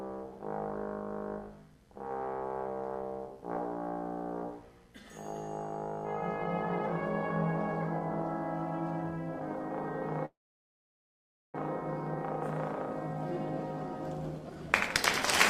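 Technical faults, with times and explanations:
10.25–11.56 s, call audio freeze: Incoming packets were likely held up in transit, so the jitter buffer ran dry. The last sound carries on only briefly before about 1.2 s of silence. Playback then resumes where it stopped, with nothing lost, but arriving 1.3 s late.
14.68–14.94 s, jitter buffer speed-up: The buffer held more audio than its target, so the receiver cut short pitch-period slices repeatedly, removing about a tenth of a second. The sound plays at 135% speed with unchanged pitch and comes across as briefly hurried.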